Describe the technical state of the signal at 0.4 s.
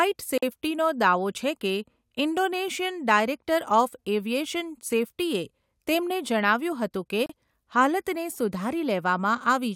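A 47 ms silence interrupts the speech at 0.38–0.43 s. This is a gap at a join of encoded pieces, left by untrimmed encoder delay and padding.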